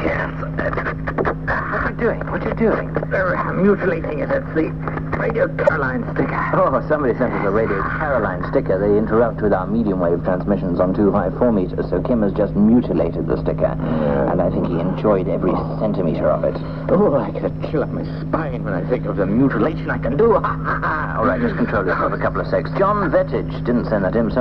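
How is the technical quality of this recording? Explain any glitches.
One glitch stands out. From 5.66 to 5.70 s there is damaged data in a compressed stream: the decoder misreads corrupted frames and resynchronises, producing a brief glitch, seen as a short disturbance on a spectrogram.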